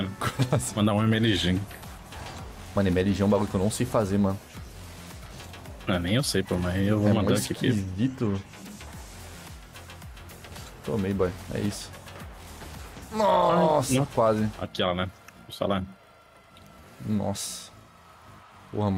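From 0.91 to 1.84 s the sound slows by 5.4% and sags nearly a semitone flat, then snaps back, likely a drift correction step retuning the playback rate.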